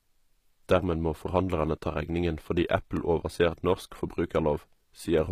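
From the start, the speech has plainly audible codec damage, likely HE-AAC compression at a low rate around 24 kbps. Only the lower spectrum is really coded, and the treble is rebuilt from copied lower bands, so s sounds come out gritty or lispy and the top end doesn't quite match the rest.

At 2.97 s there's a tiny block of digital silence, about 1.3 ms, which fits a 64-sample buffer going unfilled. It's far too short to hear as a gap, so it comes across as a quick tick where the signal cuts out and back abruptly.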